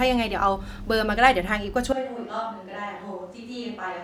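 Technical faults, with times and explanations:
1.93 s to the end: switch to a distant microphone. The speech abruptly turns roomy and hollow, loses low end and drops around 10 dB, while room noise rises to roughly 30 dB below it. The close microphone likely dropped out, leaving a farther pickup.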